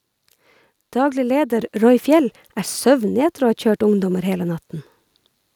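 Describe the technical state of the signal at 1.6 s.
At 1.59 s the microphone volume is stepped up: the call software judged the input too quiet and raised the device's gain in a single jump of about 5 dB. The speech and the background noise both become louder at that instant and stay at the higher level.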